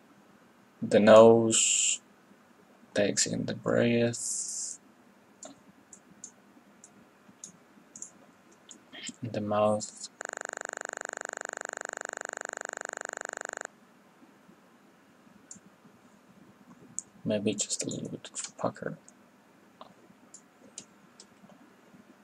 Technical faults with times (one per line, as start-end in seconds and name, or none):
10.21-13.66 system hang loop